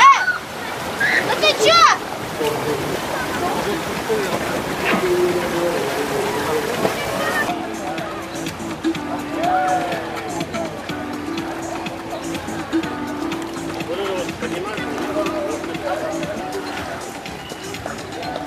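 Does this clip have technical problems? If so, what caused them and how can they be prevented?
No, this clip has no technical problems, so there is nothing to trace to a cause or prevent.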